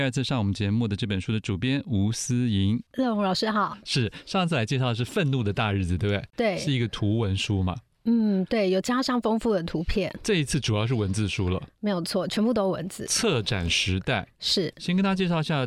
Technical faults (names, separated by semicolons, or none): none